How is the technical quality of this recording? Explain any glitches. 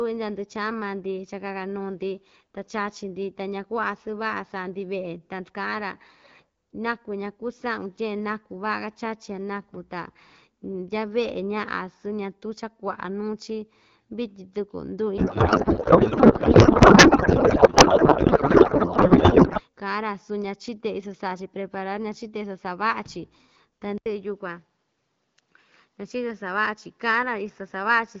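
The recording has two clear faults. One garbles the speech for several seconds. The other changes its tone near the end. The AMR wideband (HD Voice) codec carries the speech at 12.65 kbit/s, with only light coding damage.

Codec payload misread, 15.18 to 19.61 s. Here the speech turns into garbled noise and warble that barely tracks it. The sender packed AMR frames in octet-aligned form. The receiver read them as bandwidth-efficient. Every field lands a few bits off, so the decoder builds nonsense from valid-looking frames. Clean sound returns once both ends agree again.

Input switched to a poorer device, 23.98 s to the end. The sound drops out for 80 ms. It then returns duller, with nothing above 7.6 kHz. A faint new background noise sits far below the speech, and the level stays about the same. The likely cause is the system switching to a different microphone or a headset's call profile mid-recording. 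That device has a narrower band and its own noise.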